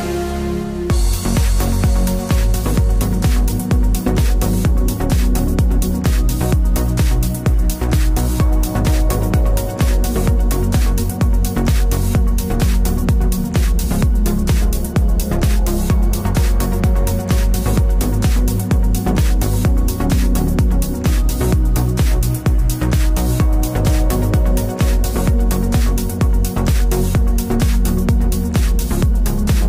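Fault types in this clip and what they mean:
No faults turn up anywhere in this one, so there's nothing to list here.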